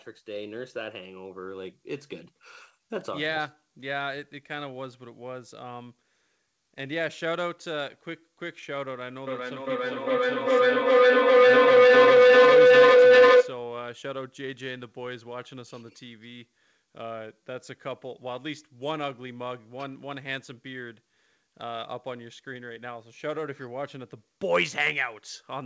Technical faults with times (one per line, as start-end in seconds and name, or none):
9.27-13.71 feedback howl